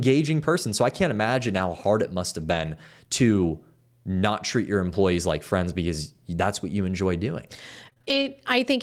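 Speech, with two brief stretches where a lost packet was rebuilt from error correction: at 1.57–1.59 s, right after "I can't imagine", and at 2.41–2.67 s, after "hard it must". The first fits a single lost packet. The decoder played low-bitrate backup copies, so nothing drops out and the sound only turns rougher and grainier. That continuity sets it apart from true packet-loss gaps. From 7.85 to 8.25 s, after "what you enjoy doing", repeated packet loss produces choppy, robotic sound. Five holes, the longest 25 ms, remove about 100 ms in total, and the last sound is stretched over roughly a tenth of a second. Here pieces are audibly missing, not merely degraded.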